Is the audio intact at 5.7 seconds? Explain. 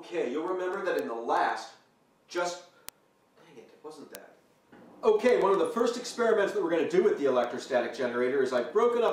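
No. Word clock ticks run from 0.10 s to 9.08 s, covering 5.7 s. The receiver's clock drifts, suggesting an error of roughly 200 ppm, so one sample is dropped or repeated at each slip. That produces sharp ticks about every 0.15 s.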